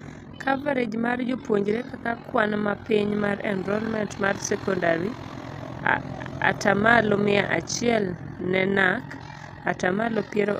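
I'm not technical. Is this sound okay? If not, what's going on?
No. Throughout the speech there is overlap-add ripple: the level pulses about forty times a second, a robotic flutter that, unlike a steady hum, comes and goes with the voice.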